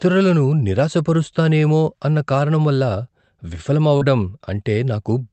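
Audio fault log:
3.97 to 4.03 s, short concealed packet loss: about 40 ms of the speech arrived too late for the decoder, so the receiver extended the preceding sound for roughly 37 ms and blended back, leaving a brief smear in audio otherwise band-limited to about 8 kHz by the call codec.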